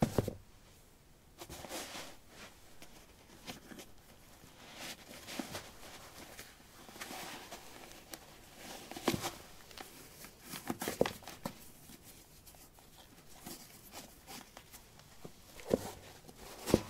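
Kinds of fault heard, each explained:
No faults can be heard anywhere in this audio.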